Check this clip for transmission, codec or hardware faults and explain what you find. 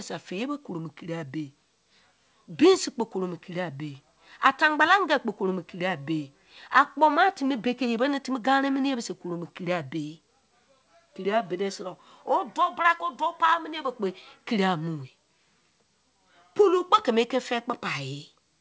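No transmission, codec or hardware faults found here.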